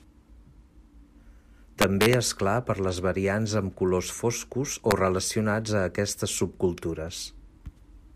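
From 1.82 to 2.14 s, and again at 4.91 s, the speech hits integer overflow. Peaks pushed about 3 dB, then about 1 dB, past full scale wrap to the opposite sign instead of being held at the limit. This gives violent cracks, far harsher than clipping's flattened distortion.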